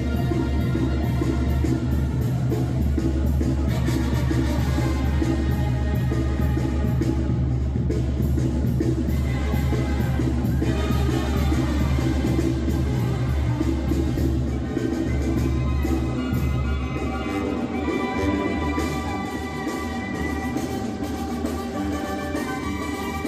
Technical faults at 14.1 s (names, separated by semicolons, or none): compressed frames skipped